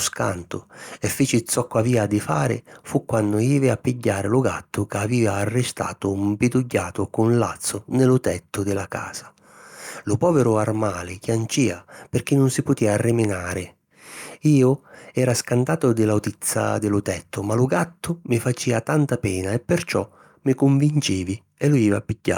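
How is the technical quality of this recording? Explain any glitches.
Nothing in this speech recording stands out as a glitch, so there's really nothing here that needs explaining.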